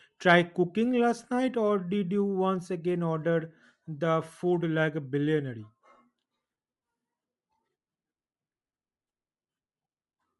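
Throughout the recording, the speech has likely passed through Bluetooth LC3 compression. The damage fits a 48 kbps stream cut into 7.5 ms frames. The LC3 encoder splits the signal into short transform blocks and spends its limited bits where the speech is loudest. It replaces the thinly coded upper detail with synthetic noise. The result is plainly audible for the full length of the clip, giving the speech a breathy, grainy edge.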